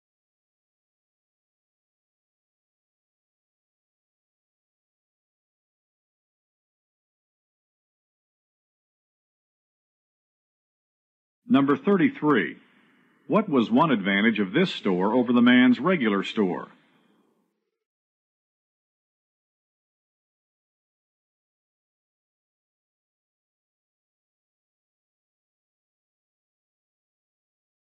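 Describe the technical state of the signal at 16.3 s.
The signal is intact at 16.3 s, with no audible fault at that point.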